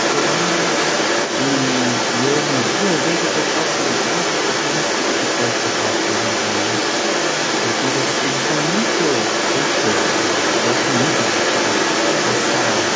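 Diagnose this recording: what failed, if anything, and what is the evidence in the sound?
Other side's voice leaking through, for the whole clip from 0 to 12.96 s: a second voice runs alongside the speech at roughly 5 dB louder than it, inside the call's 8 kHz band. At the call-processing stage, the likely cause is an echo canceller failing to subtract the far end's loudspeaker playback from the microphone.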